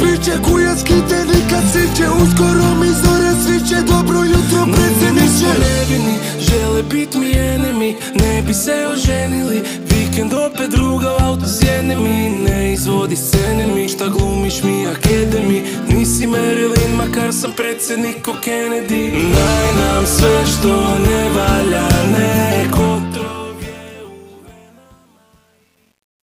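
Truncation distortion on a fade runs from 22.60 s to the end at 26.26 s, during the fade-out that begins around 22.6 s. The stage applying the fade keeps too few bits and adds no dither. As the level drops toward the smallest step, the waveform collapses into coarse square steps. From 23.65 s onward the tail turns gritty. The coarseness fits roughly 9-bit resolution.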